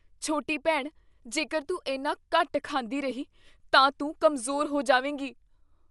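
Speech, dull throughout, with nothing above about 11.4 kHz and a rough, fluttering hiss around voiced tones, likely from low-bitrate Dolby Digital compression, fitting about 64 kbps. A spectrogram would show a flat ceiling at 11.4 kHz, with speckled noise filling the spectral gaps.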